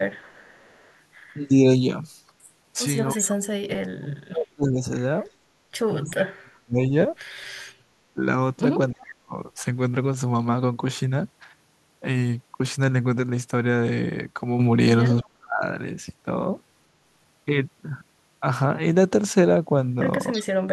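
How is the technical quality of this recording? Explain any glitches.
The recording has two kinds of glitches, both pointing to loudspeaker echo handling on a call.

Echo leak appears from 0.15 to 3.34 s, 5.27 to 6.1 s, 15.22 to 15.27 s and 20.32 to 20.44 s. A faint delayed copy of the speech trails it by 323 ms, from about 20 to 30 dB down at first, rising to about 15 dB down near the end. An echo canceller likely let some of its loudspeaker pickup through. On a spectrogram, the harmonic patterns repeat 0.32 s later as fainter ghosts.

Speech suppressed in double talk occurs in patches between 1.36 and 9.37 s, totalling about three seconds, then at 15.24 to 15.63 s and 20.34 to 20.47 s. The speech dips by up to about 40 dB, or about 20 dB in the last instance. Here the canceller likely could not separate the talker from the echo and turned both down. The waveform shows abrupt holes in the envelope, and the spectrogram shows brief vertical gaps with the high end thinning out.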